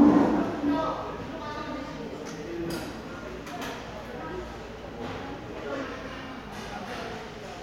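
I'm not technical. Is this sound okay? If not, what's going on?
No. From 5.83 s to 7.12 s the sound slows by 6.5% and drops about a semitone in pitch, then snaps back. This is a drift correction step, likely from clock-matching software suddenly changing the playback rate to rebalance its buffer.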